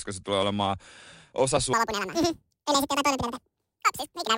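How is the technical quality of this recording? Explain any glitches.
The recording is compromised from 1.74 s onward by a wrong sample rate fault. From 1.74 s to the end of the clip, the samples are being played back at roughly twice the rate they were captured at, with no rate conversion. The ratio fits material recorded at about 22 kHz being played at 44.1 kHz. Because playback runs at 2.0 times the original speed, the speech suddenly sounds rushed and chipmunk-like, and its pitch jumps a full octave, 12 semitones, higher.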